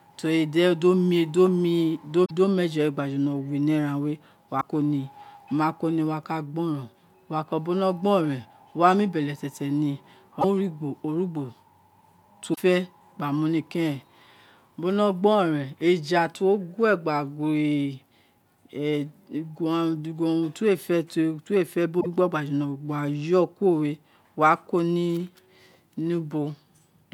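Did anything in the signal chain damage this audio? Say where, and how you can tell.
Yes, damaged data in a compressed stream, at the codec stage: brief disruptions at 2.22–2.31, 4.57–4.64 (just before "ko ni wako ni"), 10.38–10.45, 12.52–12.58 and 21.97–22.06 s. Corrupted frames make the decoder misread and resynchronise.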